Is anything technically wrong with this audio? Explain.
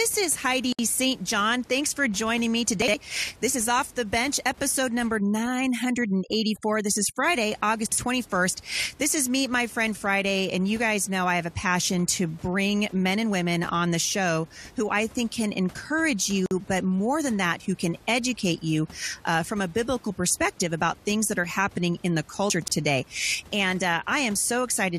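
Yes. The clip has three kinds of fault: gaps at joins of encoded pieces, chunks out of order, and overdone noise removal. The room noise, about 25 dB below the speech, is part of the recording and not a fault.

Gap at a join of encoded pieces: at 0.73 to 0.79 s (63 ms) and 16.46 to 16.51 s (about 50 ms). Separately encoded pieces were joined untrimmed, so encoder start delay and last-frame padding remain. Continuous speech breaks, then resumes where it stopped, with codec-softened edges.

Chunks out of order: at 2.82 to 2.94 s and 7.86 to 7.98 s, a 60 ms chunk plays one chunk late. At 22.5 to 22.68 s, one plays two chunks late. No audio is lost, but the order is wrong, creating three hard joins each time and a jumbled moment.

Overdone noise removal: from 5.20 to 7.24 s, a noise reducer set too strong switches off frequency bands near its noise estimate. The background drops and breaks into twinkling, warbling specks, and quiet parts of the speech go with it.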